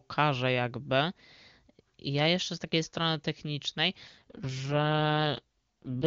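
Speech carried over an AMR wideband (HD Voice) call, and from about 4.07 s to 6.05 s there's an AMR rate drop. The bandwidth stays put and nothing cuts out, but the voice suddenly goes rough and raspy, kind of synthetic. That's the sound of a weak radio link pushing the codec from its top mode down to its lowest rate, spending bits on error protection instead. The step fits a fall from about 23.85 kbit/s to the 6.6 kbit/s mode.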